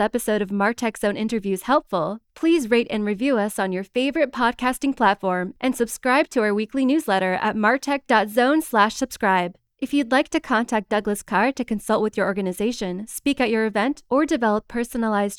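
Nothing goes wrong anywhere in this audio, so there's no technical fault to point out.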